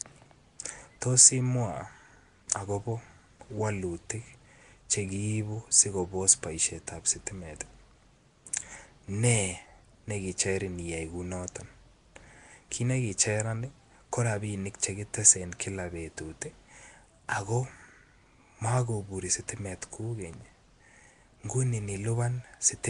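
The speech was most likely passed through Nellymoser compression, the Flash-era Nellymoser Asao microphone codec, at a rate the damage suggests is around 44 kbps. Coding each short block with a fixed, small bit budget leaves weak bands empty and fills them with noise, so across the whole clip the speech carries a rough, hissy halo and a smeared, underwater quality. Nothing is heard above 10.7 kHz.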